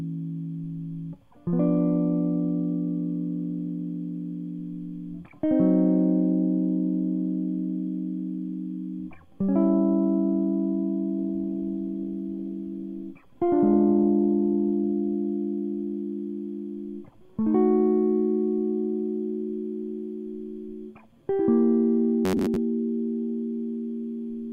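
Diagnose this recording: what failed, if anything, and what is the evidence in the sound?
A call bitrate drop hits the music from 11.23 to 16.09 s. The network's bandwidth estimate fell, and the encoder went from 96 kbps to 17 kbps, holding the lowest rate for about 2.5 s. The coarser coding and lost high frequencies leave the music muffled and rough until the rate recovers.

From 22.25 to 22.56 s the sound turns into a rigid, metallic buzz at about 94 Hz: robotic sound from repeated short buffers. The likely cause is audio arriving too seldom at the buffer stage, with roughly half the stretch filled by repeating a chunk of about 10.7 ms, which sets that buzz pitch.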